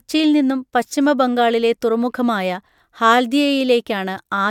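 Nothing goes wrong anywhere in this recording, so there's no technical fault to point to at any moment.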